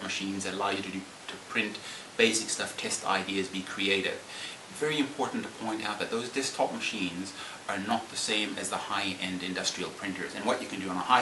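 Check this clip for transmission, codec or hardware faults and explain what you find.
No audible faults found.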